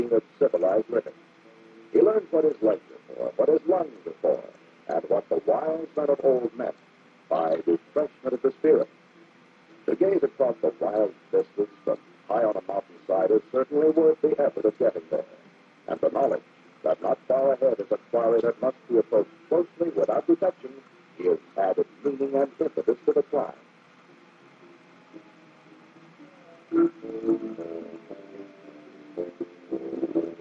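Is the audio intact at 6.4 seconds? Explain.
Yes, the audio at 6.4 seconds is intact, with no dropout, click, distortion or other fault audible at that moment.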